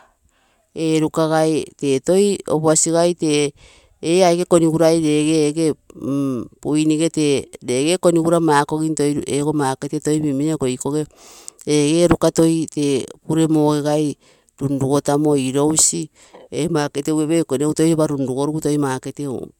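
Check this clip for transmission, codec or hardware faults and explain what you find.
No faults can be heard anywhere in this speech recording.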